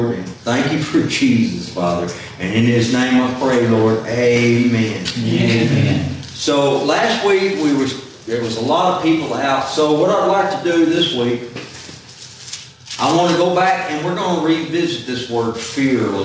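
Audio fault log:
throughout, gain pumping: loud and soft parts end up closer in level, with the gain swinging by around 10 dB, so everything sounds squashed. The likely cause is input gain set way too high with a fast limiter clamping down, heard through a call path topping out at 8 kHz.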